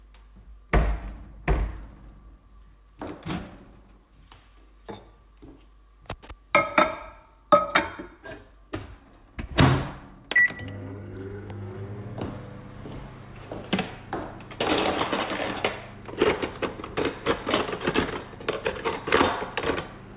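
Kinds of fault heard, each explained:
No technical faults are audible: the signal stays continuous and stable, with no interruptions, distortion or added noise at any point.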